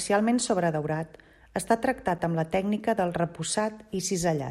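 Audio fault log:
2.18 s and 3.56 s, block of digital silence: the sound cuts out with no fade, for 8 ms between "sobredaurat està" and "amb la tècnica del", then for about 0.7 ms after "amb la tècnica del". The cut and return are so brief that each is heard as a tick or dip rather than a gap.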